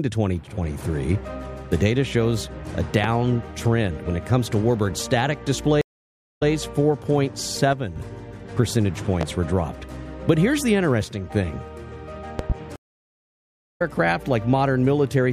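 The audio carries three kinds of fault. A loud pop lands at 3.04–3.08 s and again at 9.21–9.25 s, each a single sharp transient standing roughly 15 dB above the surrounding sound, and at 12.39–12.54 s the pop comes as two in quick succession at a similar height. In every case the sound continues underneath. The likely cause is a voltage step or pulse entering the chain, such as a plug, switch, static discharge or driver glitch, which later circuits shape into a pop. Two stream reconnects break the flow. At 5.81–6.49 s the output goes silent for 545 ms, then resumes 131 ms earlier than where it stopped, so a short stretch repeats, consistent with a server resending a burst to a fresh decoder. At 12.76–13.82 s the silence lasts 964 ms and playback picks up about 0.7 s later, so that portion is skipped, as happens when a live stream rejoins in mid-flow. In both, the restart is a new decoder starting cold rather than a continuation. 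Finally, one channel drops out briefly at 7.73–7.96 s and 11.04–11.31 s. The level of material common to both channels falls abruptly by about 6 dB for those spans and then returns. This is likely one stereo channel being lost while the signal is summed to mono, halving the shared content and removing anything carried only on the missing side.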